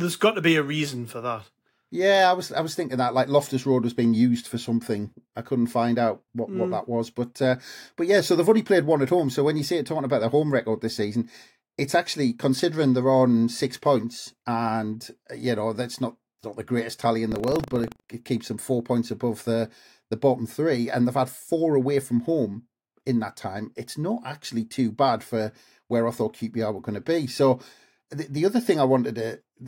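Speech, with buffer tearing from 17.28 to 18.09 s: a rattling buzz at 25 Hz, where a small slice of each 40 ms period replays audio from roughly 70 ms earlier. A spectrogram shows regular vertical lines at 25 Hz, and the waveform shows hard joins at each seam.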